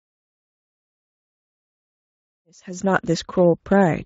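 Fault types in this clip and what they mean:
Speex codec: A CELP speech codec from older VoIP and game chat, audible across the whole clip with plainly noticeable damage, consistent with a setting near 16.8 kbps. The coder lacks bits to model the excitation faithfully, so the speech takes on a grainy, hoarse roughness. On a spectrogram, harmonics look smeared, with noise-like energy filling the gaps between them. The waveform stays continuous, and the smooth rise in level from roughly 2.5 s to 3.18 s carries the same texture.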